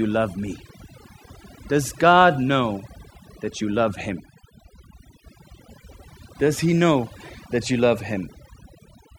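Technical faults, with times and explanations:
Throughout: overdone noise removal, where noise reduction set too strong mutes frequency bands near the noise level, leaving near-silent twinkling gaps and cutting quiet parts of the speech.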